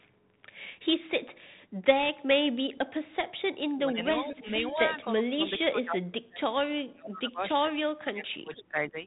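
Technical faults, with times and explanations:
0.00–0.08 s and 8.54–8.90 s, echo leak: a faint delayed copy of the speech returns about 0.48 s and 0.49 s later, likely residual loudspeaker echo the far-end canceller missed.
5.30–6.41 s and 6.83–8.96 s, speech suppressed in double talk: the speech dips sharply, by around 30 to 35 dB, over roughly 0.7 s and 1.5 s, likely the canceller ducking during overlap.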